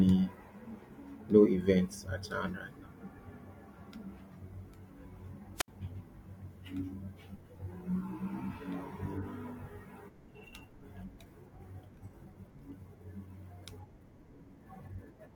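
A wireless microphone squelch dropout at 5.55–5.68 s: the weakening radio signal brings a brief hiss, then the receiver mutes the speech for about 67 ms.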